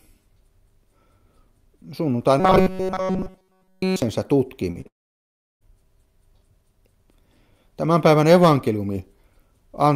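From 2.40 to 4.02 s the sound turns into a stiff, metallic buzz at 188 Hz. That's robotic sound from repeated short buffers, likely caused by a tiny chunk of roughly 5 ms being replayed almost continuously while fresh audio is skipped.

Then come two short concealed packet losses, at 4.71 to 4.77 s and 4.81 to 4.87 s, each losing about 40 ms. The receiver papered over each gap by stretching the preceding sound, so you hear a quick smear or wobble rather than a clean break.

Right after, from 4.87 to 5.63 s, there's a long network dropout, likely from nothing arriving for about 740 ms. A brief fading tail of the last sound gives way to roughly 700 ms of silence, and the audio resumes with that stretch simply gone.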